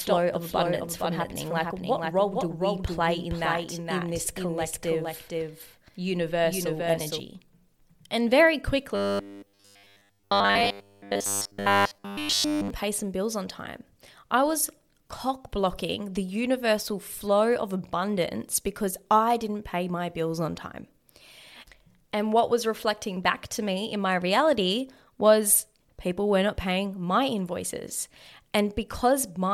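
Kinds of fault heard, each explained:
Doubled audio track: From the very start of the speech until 7.2 s, a second full-band copy of the same audio trails the original by about half a second, sitting roughly 5 dB lower, with no reverberant tail or room colouring of its own. It most likely comes from the signal being picked up again through a slower path. On a waveform the syllable envelopes appear twice, offset by that fixed gap, and the copy stops abruptly at 7.2 s rather than fading out.
Robotic sound from repeated short buffers: Between 8.95 and 12.70 s the speech becomes a rigid, metallic buzz pitched at 100 Hz that still loosely tracks the syllables. All of this stretch is made of repeats, most likely because fresh audio arrived too rarely and the playback filled each gap by looping the last 10 ms or so. A spectrogram shows evenly spaced harmonic lines at multiples of 100 Hz, and the waveform shows identical short cycles.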